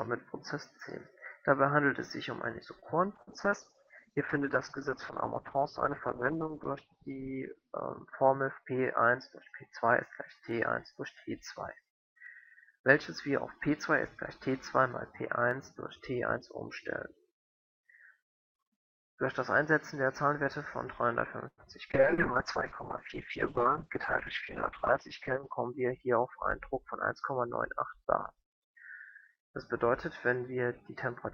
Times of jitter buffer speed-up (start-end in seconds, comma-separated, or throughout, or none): 8.64-9.02, 25.32-26.18